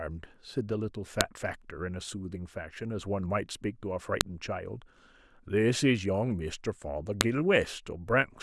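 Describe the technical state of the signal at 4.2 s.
A file header played as audio appears at 4.21 s. Two WAV pieces were joined there without stripping the second one's header, so its few dozen bytes of metadata are read as samples, producing a brief, sharp, loud click cutting across the speech.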